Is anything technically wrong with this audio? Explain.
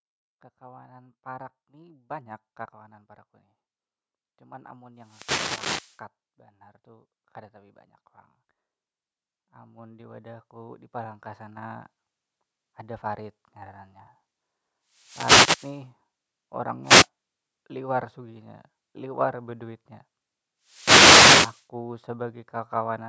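Yes. Automatic gain rising occurs from 0.59 to 2.69 s, just before "parak van", and from 9.44 to 13.32 s. The gain control judged the input too quiet and ramped its gain up, by about 8 dB and about 9 dB, so speech and background swell together.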